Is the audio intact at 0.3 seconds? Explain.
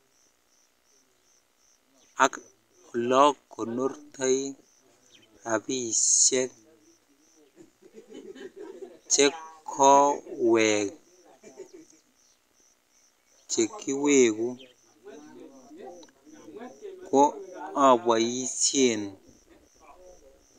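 Yes, at 0.3 seconds the speech is intact, with no dropout, click, distortion or other fault present at that moment.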